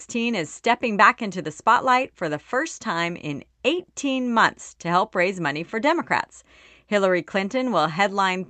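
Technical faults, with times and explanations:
No technical faults detected.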